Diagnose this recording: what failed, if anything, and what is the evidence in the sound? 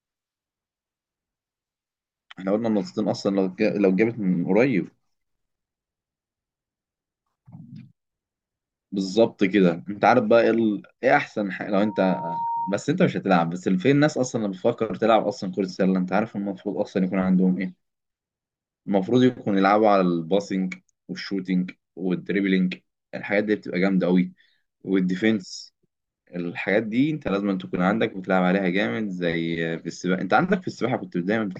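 Loudspeaker feedback squeal at playback: from 11.78 to 12.85 s a 932 Hz tone swells within a second, unlike steady hum, as mic-to-speaker loop gain exceeds one.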